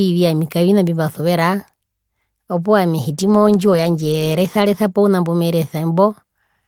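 At 3.1 s the speech degrades into a call bitrate drop that lasts until about 5.11 s. The call's bandwidth estimate fell, so the encoder was told to spend far fewer bits, and the sound fits a fall from roughly 32 kbps to 14 kbps, held at its worst for about 1.2 s. It turns coarse, watery and muffled, with the top end trimmed. Unlike packet loss, there are no gaps or glitches, just sustained degradation that then recovers.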